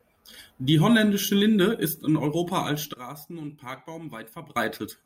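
A sudden gain jump from 2.94 to 4.56 s drops speech and noise about 12 dB, likely an unramped gain change; the waveform steps sharply.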